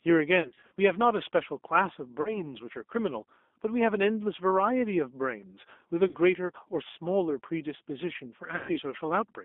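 Throughout, the speech sounds thin, slightly rough and synthetic, confined to a band from about 250 Hz to 3.6 kHz. This is the G.729 codec at 8 kbit/s, which rebuilds each 10 ms frame from a vocal-tract filter, a pitch predictor and a few pulses, and its damage is plainly audible.

At 0.42–0.72 s, 2.22–2.44 s, 6.08–6.16 s and 8.56–8.78 s, the sound smears into a buzzy, fading tone and stays weak briefly afterwards. This is VoIP packet loss concealed by the speech codec. The decoder extrapolated its last pitch and filter across 180 ms of gaps (scattered over 300 ms, runs up to 60 ms), then across gaps of 30 ms, 60 ms and 120 ms.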